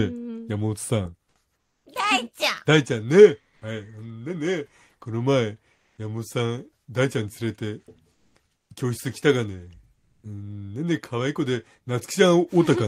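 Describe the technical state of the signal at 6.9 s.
At 6.9 s the signal is intact, with no audible technical fault.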